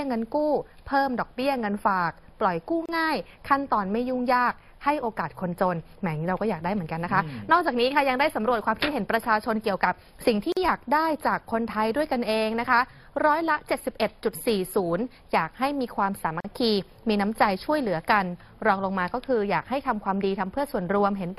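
Three short dropouts break the continuous sound at 2.86 s (31 ms), 10.52 s (44 ms) and 16.40 s (40 ms), each a gap at a join of encoded pieces. The audio was encoded in separate chunks and spliced untrimmed, so each encoder's leading delay and last-frame padding survive as silence. Each gap sounds like a brief stutter, after which the sound resumes where it left off. The waveform dips sharply, and the spectrogram shows a thin vertical blank band with slightly smeared edges.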